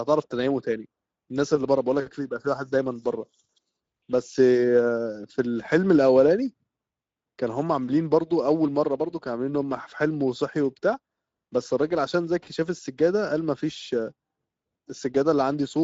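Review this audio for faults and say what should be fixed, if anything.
The speech passed through the Speex codec at a middle quality setting, with damage that fits a bitrate of around 17 kbps. At that rate the CELP coder has too few bits to model the excitation accurately, so the speech sounds noisy and hoarse throughout. Nothing is left above 7.7 kHz, and the band between 4 kHz and that cut-off is a shaped, noise-like fill rather than real detail. To prevent it, record or transmit with a higher-bitrate or more modern codec such as Opus, or keep an uncompressed original.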